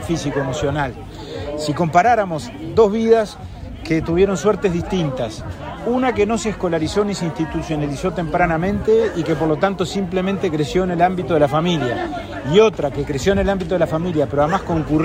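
No technical faults are audible.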